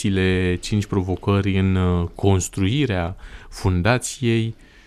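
Nothing in this speech recording jumps out as a technical fault; it just runs along without any glitch worth pointing to.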